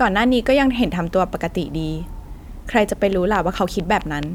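From 3.13 to 4.24 s, regular ticking at 4.5 per second, about seven clicks standing well above the speech: a train of clicks, likely from interfering equipment.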